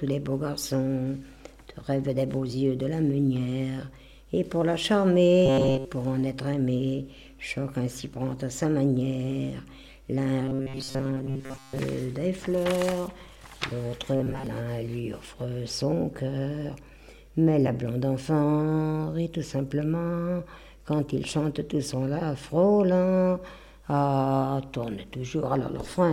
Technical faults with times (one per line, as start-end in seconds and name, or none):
5.46-5.85 robotic sound from repeated short buffers
10.45-11.79 robotic sound from repeated short buffers
14.16-14.46 robotic sound from repeated short buffers